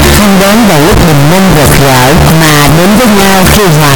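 From start to finish the sound is a loud, harsh roar, and quiet passages blast as hard as loud ones. This is likely signed and unsigned mixed up in 8-bit samples. The flipped top bit turns every zero crossing into a full-range jump.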